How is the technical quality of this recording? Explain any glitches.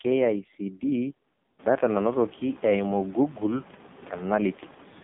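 The speech has been through a heavily compressed mobile phone codec for the whole clip, which sounds narrow, buzzy and synthetic.

AMR narrowband mobile codec, throughout: the audio is squeezed into roughly 150 Hz to 3.7 kHz, with nothing reaching above 4 kHz. The coder rebuilds each 20 ms frame from a vocal-tract model excited by a handful of pulses, and at a rate of about 5.9 kbps very few pulses are available, so the voice turns buzzy and artificial. When the room noise rises at around 1.5 s, it stays about 23 dB below the speech but picks up a swirling, watery texture, because the coder tries to model it as if it were voice. A simple band-limited telephone line would sound dull without this buzz or warble.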